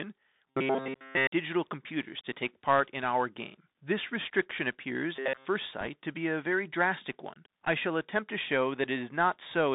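Throughout, the sound passes through a Bluetooth CVSD headset codec, which fits a 64 kbit/s CVSD stream. CVSD codes each sample as a single up-or-down step with an adapting step size, and as a narrowband headset link the band runs only from about 150 Hz to 3.7 kHz. The damage is plainly audible: sibilants turn scratchy, and a granular hiss sits under the speech. On a spectrogram, energy stops at a hard ceiling near 3.7 kHz, with a grainy floor beneath the speech.

From 0.48 to 1.27 s, just before "digital computers to take", there is robotic sound from repeated short buffers. The speech becomes a rigid metallic buzz at 133 Hz, which likely comes from a 7.5 ms stretch of audio being replayed while new audio arrived too late. Here nearly the whole span is repeated. A spectrogram shows evenly spaced horizontal harmonics of 133 Hz, and the waveform shows identical short cycles tiled end to end.

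The same robotic sound from repeated short buffers returns from 5.16 to 5.48 s, right after "restriction appears". The buzz is again at 133 Hz, and most of the span is repeated. This again points to likely late buffers, with about 7.5 ms of audio looped to fill the gap. The spectrogram shows the same comb of flat harmonics, though less completely than in the first span.

From 5.81 to 5.89 s, just before "to be a very", bit errors on a Bluetooth voice link add a brief rushing crackle. The error rate is around a couple of percent. Because every CVSD bit carries the same small weight and its effect decays, the flipped bits produce diffuse noise rather than loud clicks. On a spectrogram this looks like a short burst of broadband speckle across the whole passband. The waveform gains fine jagged roughness with no tall spikes.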